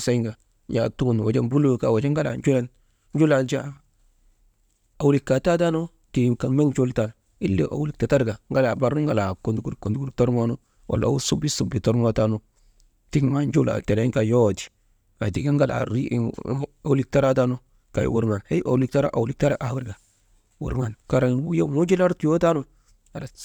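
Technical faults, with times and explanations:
No technical faults, with times or otherwise, are present in this speech recording.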